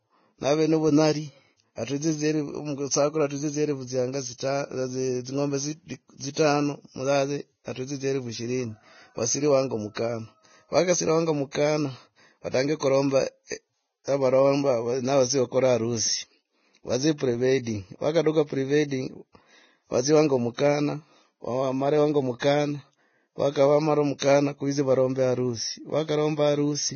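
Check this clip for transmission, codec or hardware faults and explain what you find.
The clip carries one fault, present for its whole length: Vorbis compression. Nothing reaches above 6.6 kHz, and the remaining treble is hissy and grainy, with roughened tones and smeared attacks. This is likely heavy low-bitrate Vorbis coding, pointing to roughly 17 kbps, where the coarsely quantised residue turns fine upper detail into noise of similar energy.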